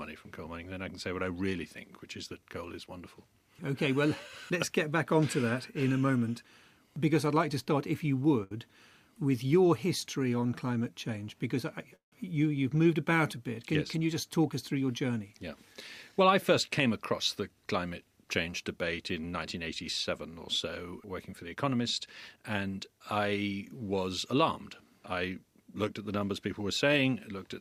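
The audio has network playback faults. At 8.43 s a short stall from a late packet holds the sound for 73 ms while the jitter buffer waits. At 11.96 s a call audio freeze inserts a 162 ms gap, mostly 130 ms of silence, likely from delayed packets. From 14.73 to 16.29 s and 20.91 to 22.64 s, jitter buffer speed-up runs the audio 7% and 5% fast at unchanged pitch, trimming about a tenth of a second each time.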